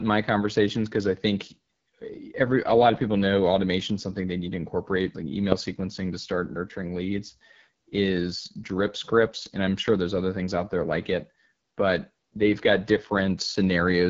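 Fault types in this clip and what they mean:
AMR wideband (HD Voice) codec: speech coded at 8.85 kbit/s sounds rough and raspy, with nothing above 7.5 kHz; unlike narrowband phone audio, it extends well past 3.4 kHz.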